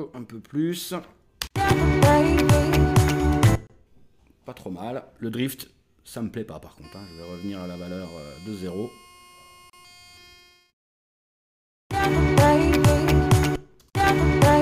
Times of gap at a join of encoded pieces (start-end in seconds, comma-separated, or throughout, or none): 3.67-3.70, 9.70-9.73